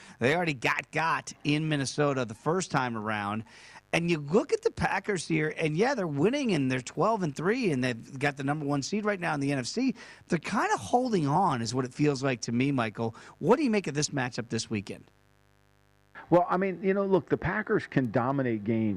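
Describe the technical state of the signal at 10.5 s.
At 10.5 s there's mains buzz running under the speech, same as across the whole clip. Sharp switching spikes from something like a dimmer or an unshielded line sit on a 50 Hz mains supply, and their harmonics climb into the kilohertz range, giving a steady, raspy buzz around 40 dB below the speech.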